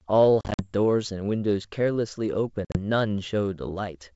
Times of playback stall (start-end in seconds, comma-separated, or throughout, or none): none